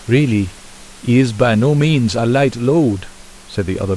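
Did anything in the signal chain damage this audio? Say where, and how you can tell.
No, nothing in the signal chain has damaged this speech recording. The only thing underneath it is the room's own background noise, sitting about 26 dB below the speech, which belongs to the acoustic space around the microphone rather than to any stage of the system.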